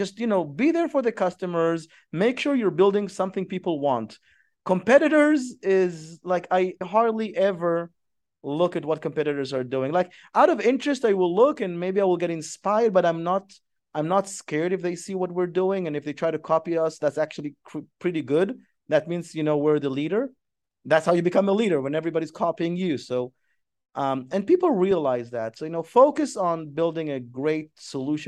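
No technical fault can be heard anywhere in the speech recording; the signal stays steady and intact throughout.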